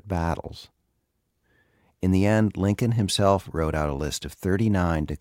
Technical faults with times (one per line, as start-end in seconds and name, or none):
none